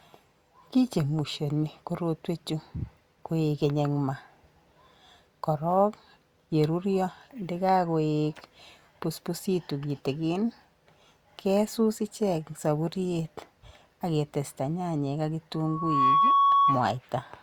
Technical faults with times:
15.54-16.98 loudspeaker feedback squeal

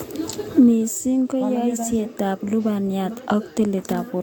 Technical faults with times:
0.00-4.22 generation loss

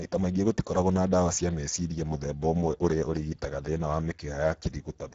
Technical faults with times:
0.00-5.14 Speex codec

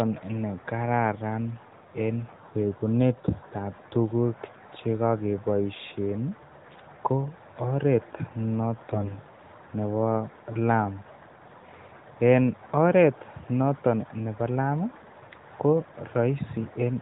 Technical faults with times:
8.90-9.19 AMR bit errors

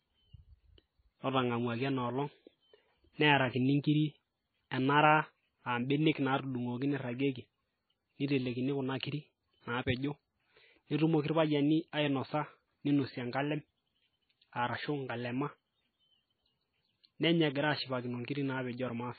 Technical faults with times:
0.00-19.19 MP3 compression

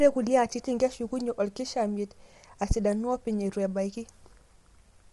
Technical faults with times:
0.00-5.12 low-delay AAC compression

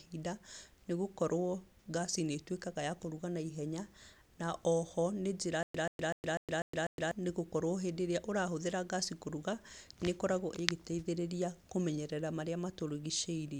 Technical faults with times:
5.63-7.11 stutter with silent gaps

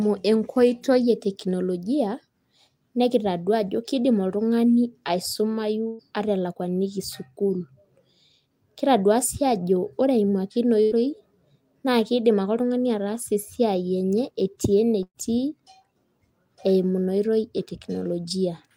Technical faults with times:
5.87-6.02 burst of packet loss
10.83-10.94 burst of packet loss
15.03-15.18 burst of packet loss

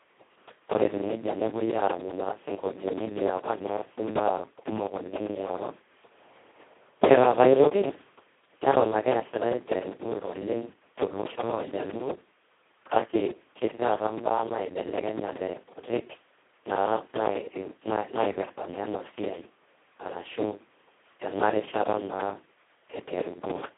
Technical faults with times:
0.00-23.78 Speex codec

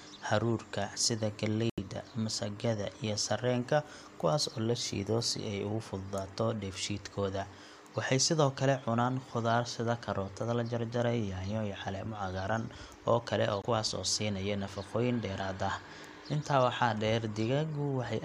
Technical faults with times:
1.70-1.80 Bluetooth stall
13.62-13.65 Bluetooth stall

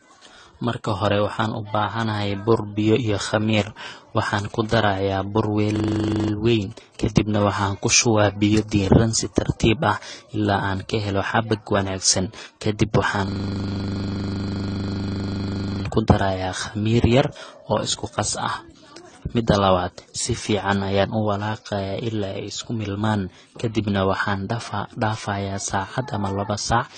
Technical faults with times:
0.00-26.98 transcoding between lossy codecs
4.50-7.91 GSM signalling bursts
5.76-6.32 system hang loop
13.28-15.84 system hang loop

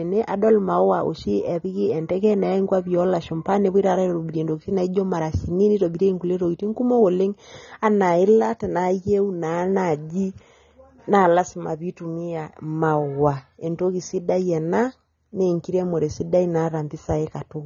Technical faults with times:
0.00-17.66 AAC compression

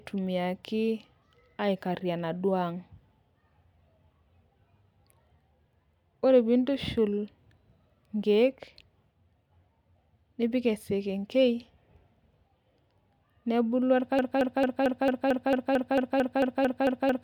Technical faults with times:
14.19-17.24 broken-record loop

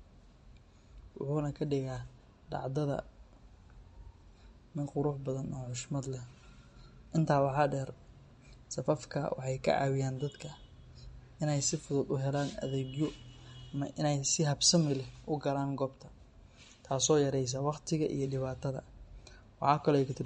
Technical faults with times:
0.00-20.26 MP3 compression

